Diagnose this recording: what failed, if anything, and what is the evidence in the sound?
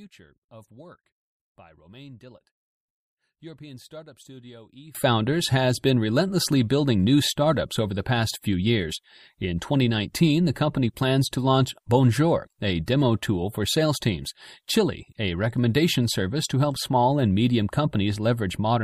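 From the start to about 4.95 s, the speech sits roughly 24 dB down and sounds faint, then comes back at full body just before "has been relentlessly building". That's the signature of one channel inverted: when the pair gets summed to mono, the centred voice cancels and only the small left-right difference survives. The cause is likely a polarity flip in the analogue wiring, like a miswired balanced lead, on one side for that stretch.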